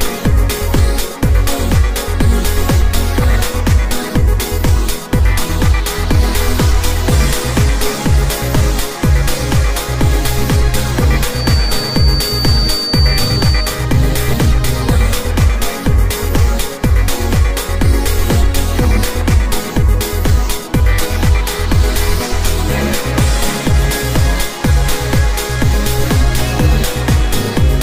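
From 11.27 to 13.81 s a feedback whistle sits near 4.6 kHz, roughly 10 dB below the programme, likely a loudspeaker-to-microphone loop ringing just short of howling.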